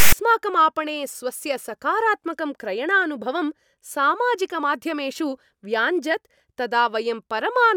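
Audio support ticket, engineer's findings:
File tags played as audio, 0 to 0.13 s at clip start. Loud rasp, hard edges, offset to one side. Decoder reading a text tag block as samples. Waveform: asymmetric, DC-shifted block. Spectrogram: broadband static, abrupt vertical boundaries before speech begins.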